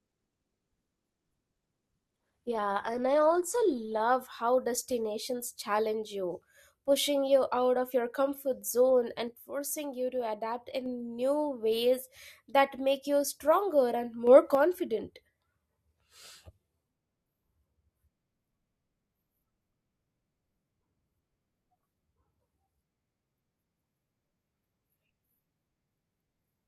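From 0 to 4.0 s, an adaptive stream starts at a low bitrate. The speech is dull, with nothing above 12 kHz, and the artefacts point to roughly 16 kbit/s. Quality lifts abruptly, without a gap, before "how destinations challenge you".

A sudden gain jump follows "of your comfort zone". It is likely an unramped digital gain change. From 9.28 to 10.86 s, speech and background drop together by about 5 dB. They return before "new ways that make". After "make you stronger and", the level jumps up by about 6 dB from 14.27 to 14.55 s.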